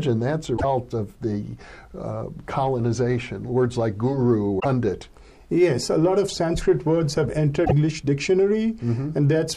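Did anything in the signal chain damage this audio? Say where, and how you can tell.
Yes. Damaged data in a compressed stream is heard at 0.54 to 0.65 s, 4.59 to 4.66 s and 7.62 to 7.72 s, each a short chirp or blip lasting roughly 70 to 110 ms. The problem lies at the codec stage. Corrupted bytes in the encoded stream cause the decoder to misread or reject those frames and lose sync. It then outputs garbage until it locks onto the next valid frame header.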